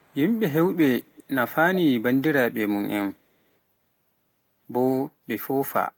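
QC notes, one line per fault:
0.00–0.16 s and 1.07–1.23 s, echo leak: a brief, delayed copy of the speech trails about 320 ms behind the original. It is very faint in the first stretch, some 40 dB below the speech, and more noticeable in the second, around 25 dB below. The likely cause is a loudspeaker at the far end whose echo canceller failed to remove what its microphone picked up, so that residue was sent back into the call.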